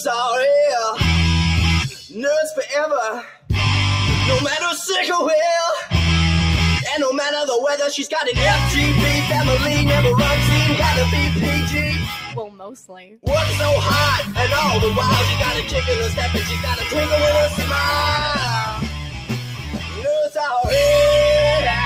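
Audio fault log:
throughout, noise suppressor applied to music or sounds: a suppressor designed for speech stays active on this audio and keeps deciding which parts are noise. Steady material and tails get pushed down while onsets pass. The gain it applies swings by roughly 10 dB, so the level pumps and flutters instead of holding still. Sustained parts thin out because the suppressor cannot tell them from background hiss.
3.23–3.49 s, 11.67–13.26 s, 16.09–16.93 s, 17.48–17.72 s, 18.66–20.05 s, sound cut by the noise suppressor: in each span the suppressor mistook the sound for noise and turned it down harder than the surrounding audio. The deepest dips reach about 11 dB at 3.23, 11.67 and 18.66 s, about 8 dB at 17.48 s and about 7 dB at 16.09 s. The longer stretches, about a second and a half each, sag in level.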